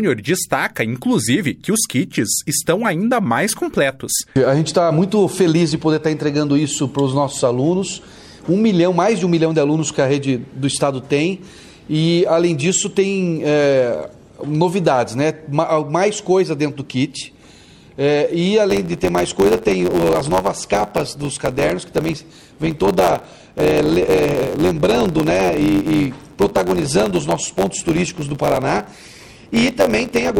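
From 18.69 s to the end, a block size mismatch (truncated) sets in. One stage writes longer blocks than the next reads, so each block's tail is dropped. A buzz at about 91.9 Hz appears. The audio runs 1.07 times fast, near normal pitch. This fits 512-sample written blocks.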